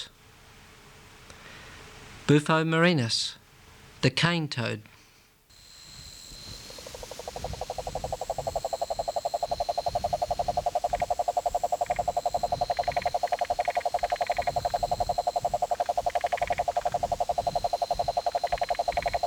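No technical faults can be heard anywhere in the recording. Nothing in the audio points to a problem anywhere along the signal chain.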